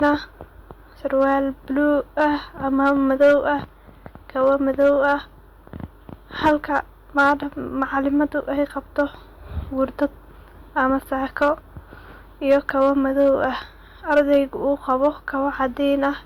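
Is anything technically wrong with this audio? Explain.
Yes. Throughout the speech, the loudest peaks break into a brief crackle and edge: hard clipping. The signal is driven about 5 dB past what the chain can pass, so under one percent of samples hit the ceiling and are flattened, adding harsh upper harmonics.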